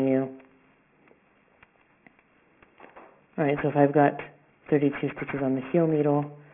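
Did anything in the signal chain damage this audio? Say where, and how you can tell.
Yes, at the sample-rate conversion stage, where aliasing runs through the whole clip. The audio was taken down from 44.1 kHz to a 6 kHz rate with no adequate low-pass filter beforehand, so everything above the new 3 kHz limit folded back below it as unrelated tones, roughly 20 dB under the wanted signal. It sounds gritty and metallic in the upper range. On a spectrogram, energy runs hard up to 3 kHz, with mirrored, wrongly sloping components reflected off that edge.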